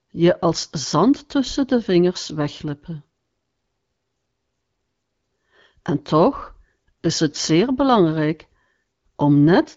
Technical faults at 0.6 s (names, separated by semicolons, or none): AMR bit errors